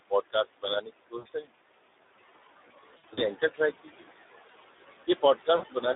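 A speech recording carried over a narrowband Speex link at 11 kbps, passed through a noise suppressor, and damaged by packet loss in three places. Room noise sits about 13 dB below the voice. The noise suppressor artifacts run throughout. The suppressor pulls the background down by about 18 dB wherever it judges a band to be steady noise, so the hiss drops away in pauses and climbs back under the voice. That pumping tracks the speech itself, which is what separates it from the codec's roughness. The Speex codec damage is plainly audible and also constant. The line passes only about 300 Hz to 3.7 kHz, so the sound is telephone-narrow, and the low-bitrate excitation gives the voice a hoarse, noisy grain in every syllable, not only in gaps. Speech cut by the noise suppressor occurs at 0.31–0.65 s (about a tenth of a second affected), 0.81–1.54 s (roughly half a second), 3.83–4.06 s (about 0.2 s) and 5.07 s to the end (about 0.2 s). 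Drops of about 21, 21, 16 and 20 dB swallow soft consonants and endings along with the background. These are clean level losses with no added tone. VoIP packet loss concealed by the speech codec is different: at 1.17–1.27 s, 2.97–3.26 s and 5.55–5.69 s, the decoder fills missing audio by stretching the last sound into a fading buzzy or noisy tone. About 80 ms is lost in the first and last events, consistent with four 20 ms frames. In the middle event, about 120 ms is scattered over 200 ms, with the longest gap 60 ms. The voice stays weakened briefly after each event.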